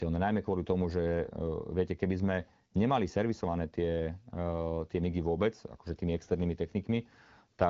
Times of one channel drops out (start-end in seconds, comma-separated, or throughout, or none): none